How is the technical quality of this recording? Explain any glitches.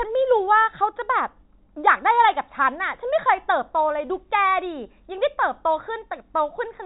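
No glitches can be heard anywhere in the recording, which carries the narrow band of ordinary G.711 telephone coding, with nothing passing above 3.8 kHz.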